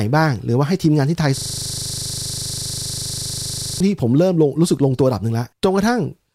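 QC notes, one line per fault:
1.38–3.80 s, system hang loop: the speech stops progressing and one 40 ms slice of audio repeats exactly, around sixty times, at a 25 Hz rate. The result is a rough, steady buzz pitched at the loop rate rather than a distinct stutter, because each slice is very short. The host or driver stalled while the audio hardware kept replaying the same ring buffer, which fits a buffer of about 40 ms.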